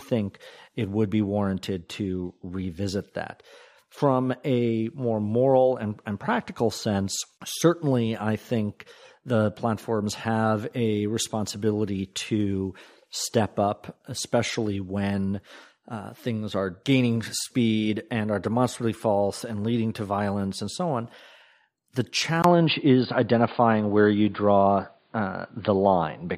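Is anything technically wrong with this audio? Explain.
Yes. From 22.42 s to the end, the speech turns dull and boxy. Nothing is left above about 4.8 kHz. A short gap of about 20 ms marks the change. The level shifts by roughly 5 dB. A faint new background noise appears, far below the speech. The likely cause is an input switched to a poorer device mid-recording. The new input passes a narrower band and brings its own level and noise.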